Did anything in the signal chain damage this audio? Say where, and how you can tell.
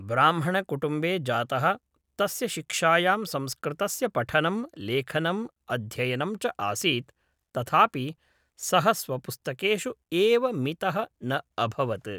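No, nothing in the signal chain audibly damaged this speech recording. No stage from capture through to playback leaves a mark that can be heard anywhere in the clip.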